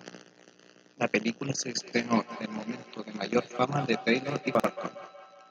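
From 1.8 s to the end, the speech comes round again as feedback echo between two devices: a second device in the room plays the call aloud, and the first device's microphone picks it up. Each repeat arrives roughly a fifth of a second behind the original, at about 15 dB below the speech at its loudest, thinner and more ringing than the direct sound. A single room reflection would blur the sound, and an ordinary echo would fade after one return. This one recurs at a steady spacing, which points to a loop between two devices.

At 4.55 to 4.64 s, chunks of audio play out of order. A 46 ms chunk arrived or was written one chunk late, so it plays after the audio that should follow it. Nothing is missing. The sound jumps back briefly, so the moment sounds garbled, with hard joins. A dropout would leave a gap, and a repeated chunk would play the same audio twice. Here all the audio is present, but part of it plays in the wrong order.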